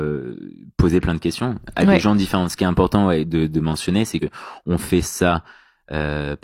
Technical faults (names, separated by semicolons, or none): compressed frames skipped